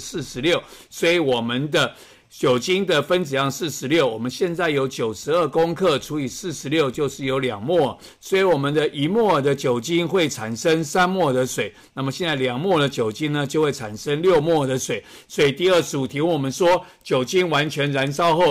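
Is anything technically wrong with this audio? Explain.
No, nothing is technically wrong with this audio.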